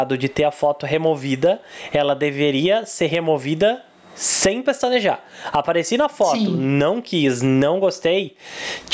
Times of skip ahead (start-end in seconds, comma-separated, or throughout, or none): none